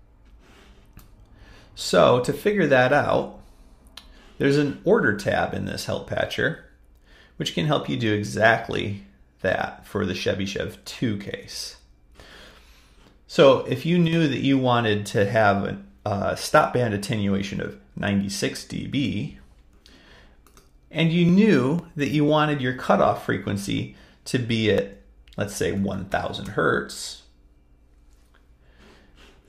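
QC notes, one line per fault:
14.08 to 14.13 s, one channel drops out: the level falls abruptly by about 6 dB for 50 ms, then returns unchanged. That is likely one stereo channel vanishing briefly before the mono sum, halving the combined signal while leaving its character intact.
21.29 to 24.78 s, periodic USB or driver dropouts: regular ticks repeat every 0.5 s, around seven in all. Each time, roughly a millisecond of audio is skipped. A background task stalling the bus or driver causes each small jump.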